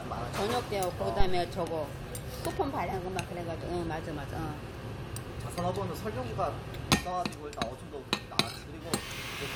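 A deep, dull thump lands at 1.20 s in this recording of everyday sounds, a low-frequency knock that dies away quickly, with its main energy gone in about 67 ms and the tail settled by 1.50 s. This is a phantom power thump. When the supply to a live input is switched on or off, the sudden DC step passes through the coupling capacitors and reaches the recording as a single low, decaying pulse.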